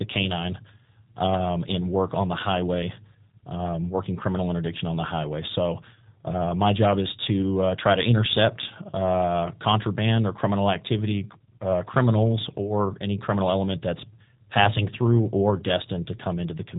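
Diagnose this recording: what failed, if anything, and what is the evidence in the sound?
G.729 codec damage runs through the whole speech clip, a codec-stage failure. Nothing above 4 kHz survives, and the speech sounds plainly rough and synthetic, which fits an 8 kbit/s coder that rebuilds each 10 ms frame from a vocal tract filter, a pitch predictor and a few pulses.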